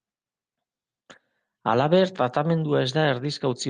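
At 1.11 to 1.17 s and again at 2.45 to 2.63 s, lost packets were rebuilt from error correction: the decoder played lower-bitrate copies carried in later packets, so there is no gap, just briefly rougher, noisier speech over about 40 ms and then 100 ms, within the Opus call path's 12 kHz band.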